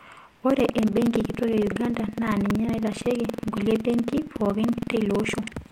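From 0.46 s to the end of the speech, buffer tearing produces a steady robotic rattle at 21.5 Hz, which fits a 2048-sample buffer. The software writing the ring buffer and the hardware reading it have drifted so their positions cross inside every period. About 15% of each buffer replays audio roughly a fifth of a second old, with hard joins on both sides. Unlike an underrun, there are no silent gaps, and the buzz disappears whenever the speech pauses.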